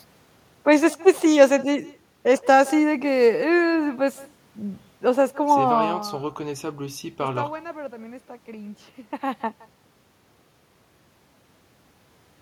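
From start to finish the far end is playing the call over a loudspeaker while its microphone picks it up again, and no echo canceller removes that pickup, so the speech returns after the network round trip. The result is echo with no canceller: every phrase is followed roughly 150 ms later by a faint copy, about 22 dB down, sounding thin.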